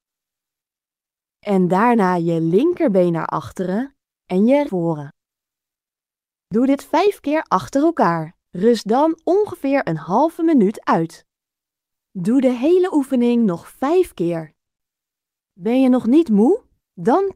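Roughly a second of audio was dropped at once while later audio was already waiting, a skip ahead at about 4.69 to 4.71 s. Nothing fills the break, so playback jumps forward abruptly and the material on either side is spliced almost directly together, with about a second of the sound missing. Starting at 4.66 s, the buffer still held more audio than its target and ran a jitter buffer speed-up, repeatedly cutting short pitch-period-sized pieces until 11.61 s. Around 0.7 s in total is trimmed away, so that stretch plays at about 109% speed with the pitch unchanged, sounding hurried before settling back to its normal rate.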